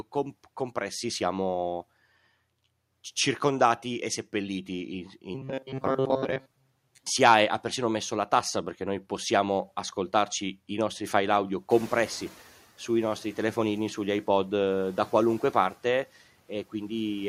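From 5.35 to 7.06 s, just before "ha persino messo la", the speech turns into a rigid metallic buzz near 133 Hz that loosely tracks the words. This is robotic sound from repeated short buffers, likely from audio arriving too seldom, with roughly seven tenths of the signal being repeated fragments of about 7.5 ms.

At around 11.5 s the room noise jumps by about 16 dB, and from 11.70 to 12.33 s, between "i nostri file audio" and "sui nostri telefonini sugli", it comes through louder. It then settles by about 5 dB as the noise suppressor catches up, adapting over 630 ms.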